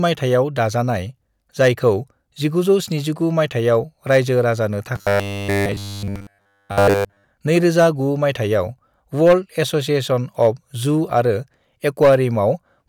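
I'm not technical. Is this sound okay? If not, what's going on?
No. From 4.96 to 7.24 s there is robotic sound from repeated short buffers: a steady metallic buzz near 100 Hz, likely from 10 ms of audio looping. Unlike dropouts, there are no silent gaps.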